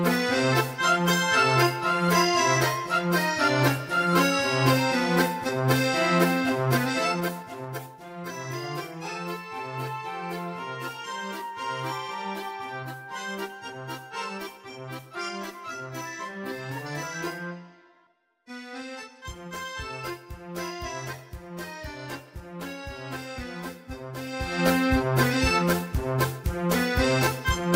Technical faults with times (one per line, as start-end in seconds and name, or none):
6.66-8.11 zipper noise